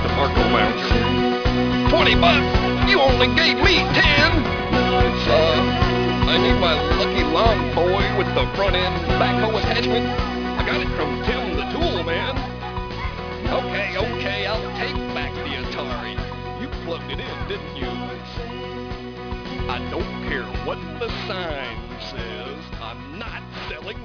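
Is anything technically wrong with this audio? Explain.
Yes. Aliasing runs through the whole clip. The sample rate was lowered without a filter, which fits a drop from 48 kHz to 11 kHz. Content above 5.5 kHz folds back to false, unrelated pitches. The folded energy sits fairly close to the real signal. The top end sounds gritty and metallic.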